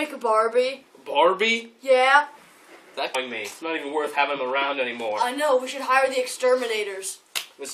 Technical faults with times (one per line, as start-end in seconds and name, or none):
3.14 damaged data in a compressed stream